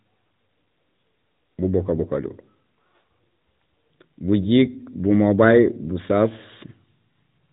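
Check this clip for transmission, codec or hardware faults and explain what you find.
One fault runs through the whole clip: AMR narrowband mobile codec damage. From start to end, nothing above 3.8 kHz survives, and the speech has a plainly audible buzzy, synthetic edge. The codec rebuilds each 20 ms frame from a vocal-tract model and a few excitation pulses, and the degree of roughness fits a mid-rate mode of around 10 kbps. A plain band-limited telephone line would sound muffled but natural; this sounds artificially reconstructed.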